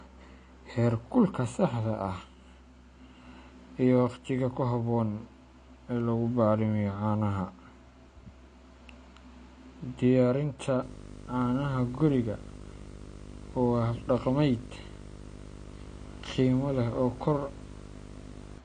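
From the start, the speech sounds dull and smeared, with a watery, fizzy edge on sibilants, and nothing is heard above 9.6 kHz. This is likely AAC compression: the encoder discards and coarsely quantises the spectral detail its hearing model judges least important, so the top octave is removed and the remaining bands carry audible quantisation noise. The damage is plainly audible, which fits AAC-LC at around 32 kbps.

From 10.82 s to 18.58 s, a steady buzz, sitting roughly 10 dB below the speech, joins the speech, with a grainy hash spread above it and a very high whine at 15.6 kHz. This is video or display buzz. A screen or video cable is coupling interference into the audio path. The buzz follows the picture's 50 Hz field rate, and the whine comes from the line-scan rate.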